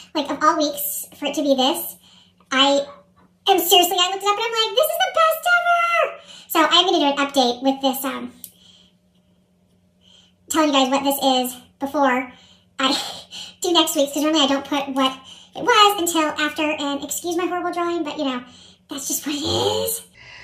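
A sudden gain jump runs from 3.92 s to 6.28 s, where the level drops abruptly by about 6 dB and then snaps back up just as abruptly at the end. The sound and its background noise fall and rise together, with no fade on either edge. This is likely a digital gain setting applied from one sample to the next without any ramp, consistent with a single-bit shift halving the amplitude.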